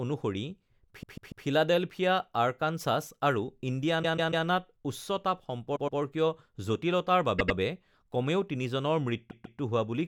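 Stutters at 1.02–1.45 s and 4.02–4.45 s (a 144 ms block heard three extra times), then 5.75–5.99 s (120 ms), 7.38–7.57 s (96 ms) and 9.30–9.59 s (144 ms), each replayed twice. These are repeated frames: runs of compressed frames, likely 24 ms each, were decoded again, lengthening the speech.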